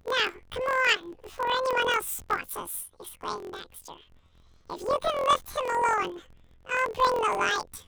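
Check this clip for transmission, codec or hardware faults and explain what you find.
One fault runs through the whole clip. Planar audio read as interleaved, throughout: each block of about 23.2 ms, which fits a 1024-sample block, plays twice at double speed, left then right, so the speech sounds an octave high with a flutter at 43.1 Hz.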